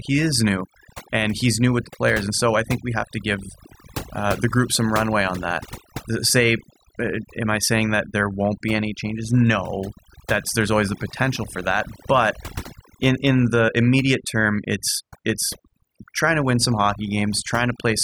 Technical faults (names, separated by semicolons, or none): overdone noise removal